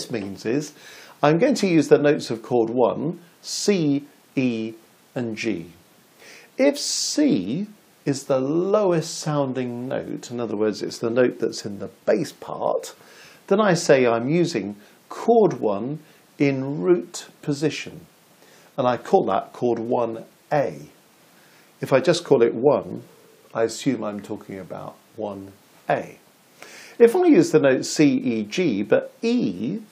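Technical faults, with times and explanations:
No technical faults are present, so there are no times or explanations to give.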